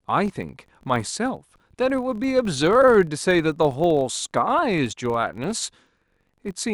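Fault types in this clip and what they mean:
Filter restarted on every block: the filter starts each block from silence. A buzz at 46.9 Hz runs throughout, tracking speech level, fitting 1024-sample blocks.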